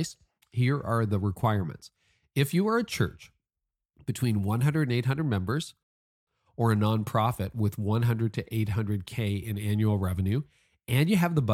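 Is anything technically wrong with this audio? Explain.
Yes. At 5.83 s the speech halts for a rebuffering stall lasting 0.44 s, until 6.27 s, when it resumes with "or a nonprofit with". The player had exhausted its downloaded audio and waited for more. Unlike a dropout, nothing is skipped: speech picks up exactly where it stopped, only later.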